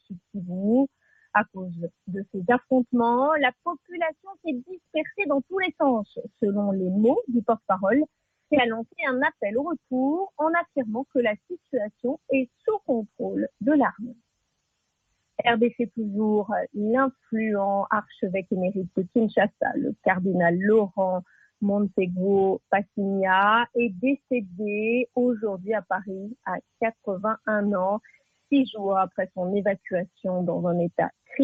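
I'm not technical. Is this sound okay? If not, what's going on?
No. The noise suppressor mistook parts of the sound for background noise and turned them down. This sound cut by the noise suppressor happens at 1.02 to 1.3 s, 2.07 to 2.37 s, 3.86 to 4.47 s and 4.66 to 4.95 s. Each time, the sound briefly dips much quieter.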